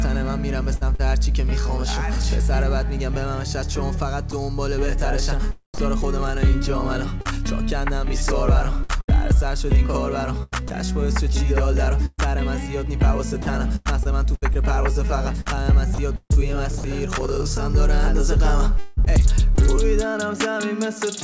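Around 0.76 to 1.01 s the sound gets chopped by the voice detector, likely because the sender's detector flipped between sending and muting a few times. About 91 ms of real sound gets swapped for comfort noise, so that short stretch stutters.

Then come two brief dropouts, 4.31 to 4.33 s (20 ms) and 5.74 to 5.78 s (40 ms). Each is sound dropped by the voice detector, likely the detector mistaking a quiet bit for background and going silent. The receiver fills each gap with steady comfort noise, so you hear a tiny hole of flat hiss before the sound snaps back.

The long one runs from 7.21 to 16.32 s. Again the voice detector is likely chopping the sound, toggling on and off across those nine seconds, with about 0.8 s of the original replaced by comfort noise. It comes across as choppy. Inside that stretch, 13.42 to 13.46 s is another clean 40 ms drop into comfort noise. Overlapping its tail, 15.94 to 16.84 s has more chopping, with about 100 ms swapped out, likely by the same detector behaviour.

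Last, 18.78 to 19.59 s is repeated packet loss with a robotic sound. There are three holes, the longest 190 ms, each patched by stretching the last bit of sound. About a quarter of that span is concealed, and it sounds broken up. Through all of this the call codec band-limits everything, with nothing above 8 kHz.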